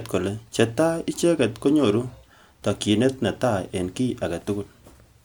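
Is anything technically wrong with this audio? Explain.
No, no technical faults.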